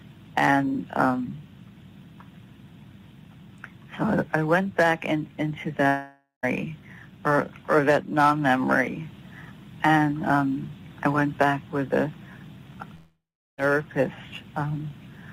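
At 5.87 s the audio breaks off for about 0.57 s, until 6.45 s, and at 12.95 s it does so again for about 0.65 s, until 13.60 s. Each time, the last sound is stretched into a fading buzz or hiss, then goes silent for 0.14 s and 0.38 s respectively, before resuming with material skipped. This is likely a long network dropout, with the receiver concealing the loss. On a spectrogram the decaying smear and the blank band stand out, and the waveform shows the envelope collapsing to near zero.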